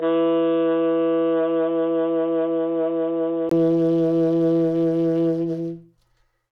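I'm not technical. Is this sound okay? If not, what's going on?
No. For the first 3.51 seconds the music sounds dull and boxy, with nothing above 3.8 kHz, slightly quieter and with faint background noise. After a brief gap it opens up. This is likely an input switched to a poorer device, such as a headset, before the better microphone takes over.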